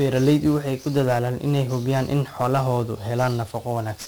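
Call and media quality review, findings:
1-bit DFPWM compression, present throughout. Speech sounds fuzzy and crackly. Heavy broadband hiss buries the treble. Probable component: DFPWM codec, which fits a 48 kbps stream. Each sample keeps only one bit steering an adaptive level up or down. Coarse quantisation produces the noise.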